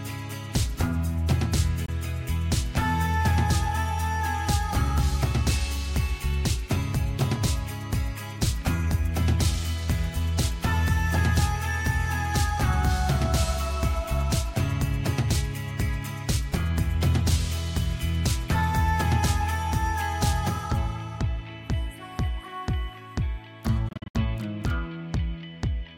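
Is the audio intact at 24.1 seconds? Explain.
No. From 23.89 to 24.15 s there are choppy silent gaps, likely a Bluetooth dropout from late wireless packets. About 171 ms of sound is missing, the longest gap 64 ms, and it resumes as if it had played on. A waveform shows flat gaps, and a spectrogram shows blank vertical stripes.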